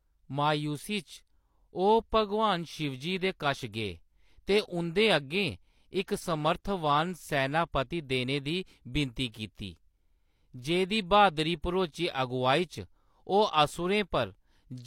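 From 2.77 to 7.48 s there is periodic clock jitter: interference at around 100 Hz wobbles the converter clock, adding sidebands that give the speech a rough, metallic edge. At 9.32 to 9.34 s, just after "देने दी विनती", pre-echo appears: codec quantisation noise spreads about 20 ms ahead of an attack, heard as brief hiss and smearing.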